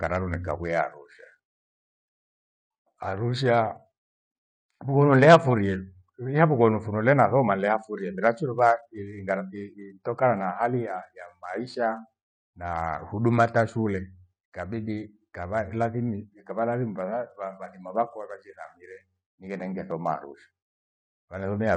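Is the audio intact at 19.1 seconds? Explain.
Yes, the speech at 19.1 seconds plays through cleanly, with no dropout, click, distortion or other fault at that point.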